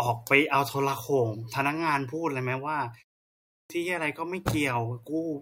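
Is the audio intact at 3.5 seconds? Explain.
No, a clipped start after a pause swallows about 0.29 s from 3.41 to 3.70 s; the output stays asleep after the 0.46 s silence, so speech begins abruptly, unlike muted pauses, which lose nothing.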